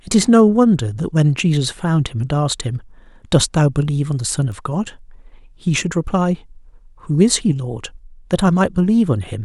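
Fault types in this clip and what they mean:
Bit error spike: one flipped bit corrupts a single sample at 4.52 s, so the value jumps by a power of two and returns at once, peaking at about -20 dBFS. It sounds like one sharp broadband tick, unrelated to the surrounding speech.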